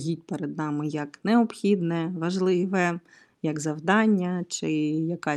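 No technical faults are audible.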